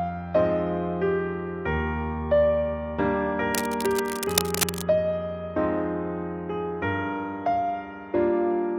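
From 3.54 to 4.83 s, cable scratch noise appears. Dense, uneven bursts of scratching and rustling sit over the sound, nearly as loud as the sound itself. The likely cause is a worn cable, connector or control being moved, with its contact resistance jumping rapidly.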